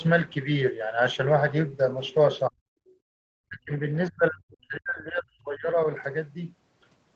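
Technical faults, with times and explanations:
2.50 to 2.55 s and 3.49 to 5.87 s, speech suppressed in double talk: the voice itself dips by up to about 40 dB, likely because the echo canceller heard overlapping far-end audio and turned the talker down.
2.83 to 3.21 s, background gated by the echo canceller: the room sound, not the talker, drops by about 39 dB while the loudspeaker plays, then recovers once the canceller releases.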